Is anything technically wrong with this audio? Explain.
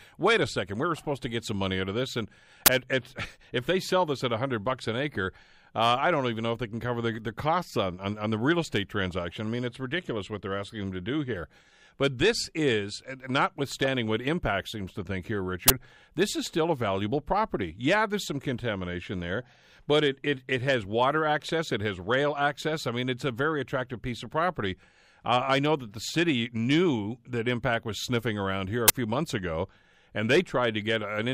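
Yes. Uninitialised buffer bursts occur at 2.66–2.68 s before "at at", at 15.68–15.70 s between "seems to think here" and "this is still a", and at 28.88–28.90 s between "sniffing around here a" and "few months ago and". Each time, a 20 ms block played out before audio was written into it, so leftover memory was read as samples and heard as a short, loud crack.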